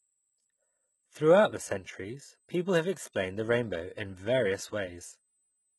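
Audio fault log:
throughout, USB whine: a steady fixed-pitch tone at 8 kHz, strongest at its 16 kHz multiple, sits around 40 dB below the speech. It points to the bus's 125-microsecond microframe current draw leaking into the audio through power or ground.
throughout, HE-AAC compression: nothing remains above 11.8 kHz, and the treble is heavily damaged, with gritty, metallic sibilants. This is likely low-bitrate HE-AAC, consistent with about 16 kbps, rebuilding the highs from copied lower bands whose harmonics misalign across the crossover.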